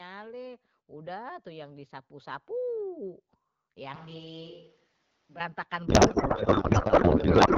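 From 3.96 to 5.40 s the close microphone's signal likely drops out and the recording falls back to a distant microphone, perhaps one on a camera. The sound turns suddenly roomy and hollow, loses bass and falls by around 10 dB, while room noise rises to roughly 25 dB below the speech. At 5.40 s it snaps back to the close, fuller sound just as abruptly.

At 5.87 s a codec payload misread begins, and it lasts to the end of the clip at 7.58 s. The two ends of the link disagree about how the AMR bits are packed, which fits octet-aligned frames being unpacked as bandwidth-efficient ones. The decoder therefore reads parameters from the wrong bit positions. The speech is replaced by garbled noise and warble that barely tracks it, unlike the lightly coded AMR-WB HD Voice at 12.65 kbit/s heard before.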